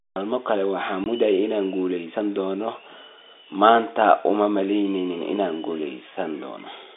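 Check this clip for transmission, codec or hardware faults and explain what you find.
One transmission fault stands out: a single dropout in the speech at about 1.04 s, just after "kale waxaan". It is packet loss filled with silence. One 20 ms packet, the length of a typical telephony frame, never arrived, and the receiver played digital silence in its place. The sound stops abruptly and restarts at hard edges. On the waveform it appears as a flat gap; on the spectrogram, a thin empty vertical strip. The narrowband G.711 line sound, cut above roughly 3.6 kHz, is heard on either side of the gap.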